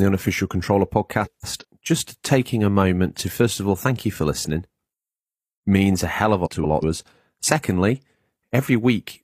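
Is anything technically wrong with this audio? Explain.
Yes. Frames out of order occur at 1.25–1.64 s and at 6.45–6.84 s, right after "a hell of a". Two neighbouring runs of about 186 ms each, which fits four frames per run, were decoded in swapped order. Each stretch plays with its halves exchanged, giving a garbled flutter.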